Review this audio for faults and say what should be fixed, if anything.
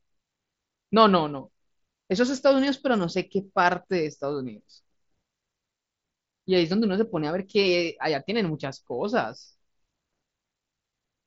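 Nothing stood out on listening to this speech clip, so there is nothing here that needs fixing.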